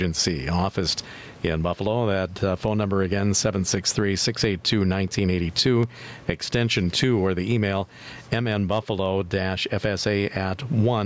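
Gain pumping runs through the whole clip. The input gain was likely set far too high, so a fast limiter clamps down on every loud syllable, swinging the level by roughly 15 dB. The room noise sits about 37 dB below the speech, and the speech is left squashed and flat.

From 4.83 to 6.09 s come CD scratch ticks. A blemish on the disc destroyed more data than error correction could rebuild on each turn, so the player patched over the damage. The result is six short ticks, the longest about 1.5 ms, repeating about five times a second.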